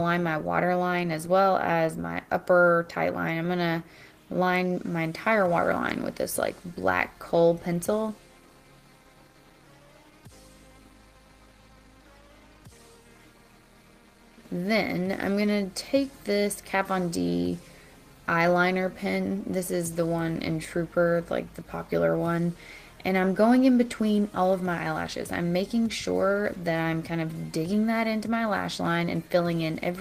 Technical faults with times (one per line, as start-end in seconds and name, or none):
none